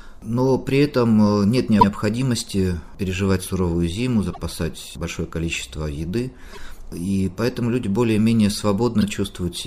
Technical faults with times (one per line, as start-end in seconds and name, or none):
1.79-1.87 repeated frames
4.32-4.38 repeated frames
6.52-6.57 repeated frames
9.00-9.03 repeated frames